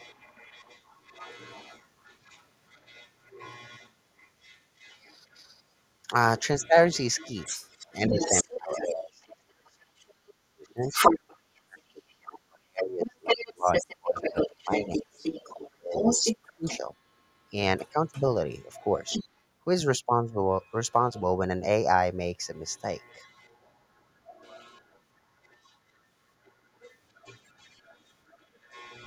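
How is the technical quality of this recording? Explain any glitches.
The quality is poor, with two echo-related faults running through most of the speech.

A second, fainter voice sits behind the talker from 0.0 to 5.38 s, 6.59 to 8.77 s, 9.82 to 16.77 s, 17.77 to 19.25 s, 20.61 to 21.22 s and 22.55 to 29.06 s. It is mostly quiet but rises to roughly the talker's own level from 9.82 to 16.77 s. This is the other side's voice leaking through, likely from a loudspeaker the echo canceller failed to fully subtract.

From 8.09 to 16.89 s, the talker's voice repeatedly sinks away, by as much as about 35 dB and for around five seconds in total. This happens while the far voice is also sounding. It is speech suppressed in double talk, likely because the canceller, unable to tell the two apart, turned both down.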